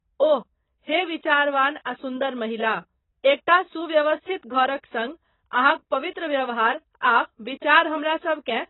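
AAC compression runs through the whole clip, from start to finish, and the heavy damage likely comes from a low-bitrate AAC-LC encode. Nothing survives above 3.9 kHz, so the speech sounds dull and boxed-in. The encoder spent too few bits on each frame's spectrum, which points to a rate around 16 kbps. It dropped the upper band and coarsely quantised the rest, smearing consonants and leaving a thin, processed texture over the speech.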